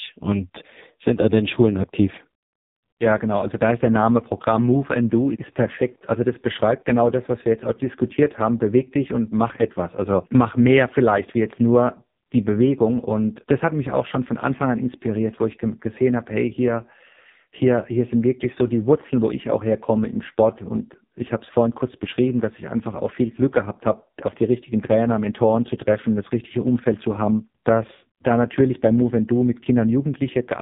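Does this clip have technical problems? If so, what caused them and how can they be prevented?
Yes. The whole recording has gone through the AMR narrowband mobile codec, and hard. The speech is cut off above about 3.8 kHz, so it's dull and boxy, and the heavy damage makes it buzzy and synthetic. That fits AMR-NB's low 5.15 kbps mode, where the codec rebuilds speech from a vocal-tract model and a handful of pulses per frame. To avoid this, record locally or use a wideband path instead of a narrowband mobile call.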